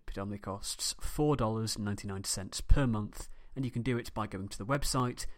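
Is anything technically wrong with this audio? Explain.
Yes, there are periodic USB or driver dropouts from 3.75 to 5.25 s, right after "per month and you". Every 0.25 s something blocks the audio path and roughly half a millisecond of speech is skipped, giving about seven evenly spaced little ticks.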